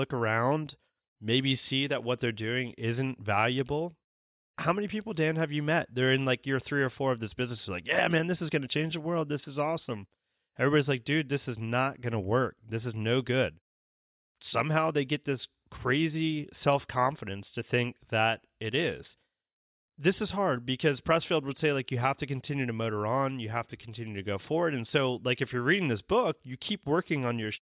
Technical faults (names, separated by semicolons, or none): none